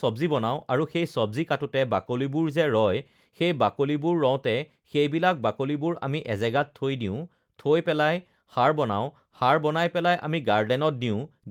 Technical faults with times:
none

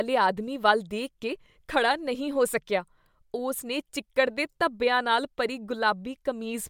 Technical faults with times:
none

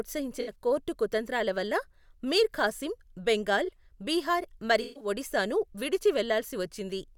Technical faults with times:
0.40-0.50 corrupt frame concealed
3.65-3.69 corrupt frame concealed
4.81-5.08 corrupt frame concealed

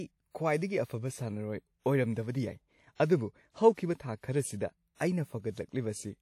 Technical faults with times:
0.00-6.22 WMA compression

